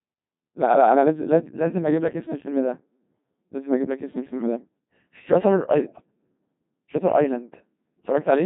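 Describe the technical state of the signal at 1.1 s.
At 1.1 s the speech carries Codec 2 vocoder damage, heavy throughout, resynthesised from sine waves at a rate fitting 2.4 kbit/s: buzzy, robotic, with the spectrogram empty above 3.8 kHz.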